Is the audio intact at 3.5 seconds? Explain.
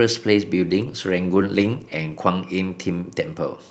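Yes, the speech at 3.5 seconds is intact, with no fault at that moment.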